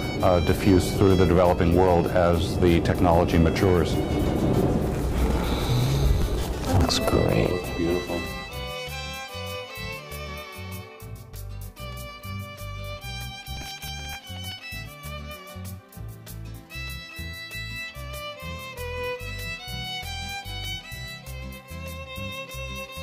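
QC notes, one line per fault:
6.16–6.84 s, processor overload crackle: many short buffers, around 5 ms each, miss their deadlines, and stale audio repeats. The waveform shows hard-edged steps, and the spectrogram shows vertical broadband streaks.
13.57–14.63 s, processor overload crackle: a longer run of missed buffers, roughly twenty, produces gritty tearing. The waveform shows repeated fragments with abrupt discontinuities, and the spectrogram shows dense vertical clicks.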